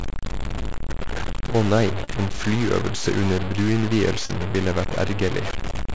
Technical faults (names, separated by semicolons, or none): low bit depth without dither; short concealed packet loss